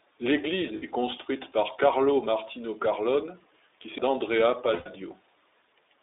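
Across the whole recording the speech has passed through the iLBC codec, and the damage is plainly audible: a slightly rough, synthetic edge on every syllable. The band runs only from about 300 Hz to 3.7 kHz, which fits a narrowband telephone line, and the texture suggests the 15.2 kbps mode with 20 ms frames. On a spectrogram everything above 3.7 kHz is empty, and the harmonics look slightly smeared and grainy.

At 0.76 to 0.83 s, a 60 ms stretch of lost iLBC frames (consistent with three dropped 20 ms frames) is covered by the decoder repeating the last pitch cycle blended with noise. It sounds like a brief held, faintly buzzy vowel, and the speech returns cleanly straight afterwards. The waveform shows a short run of near-identical periods, and the spectrogram shows flat, frozen harmonics with a little added noise.

At 3.98 s a CD skip produces a very brief mute and a tick, then playback resumes from a different point on the disc. 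The laser has jumped to another turn of the spiral. On the waveform there is a tiny gap with a sharp edge and a discontinuity either side. The spectrogram shows a thin vertical click line where the contours break abruptly.

At 4.74 to 4.87 s a longer 120 ms loss of iLBC frames (about six frames) gives a held, breathier pitch cycle that fades as it runs on. The speech recovers almost at once. The spectrogram shows steady harmonics dimming into noise, and the waveform envelope shows a repeating pattern tapering off.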